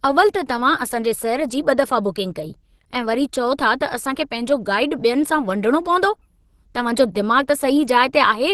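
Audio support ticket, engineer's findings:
Muffled, hoarse, grainy speech throughout, nothing above 12.1 kHz. Likely Opus compression in hybrid mode, fitting a 16 kbps stream; bandwidth capped, starved bands filled with noise.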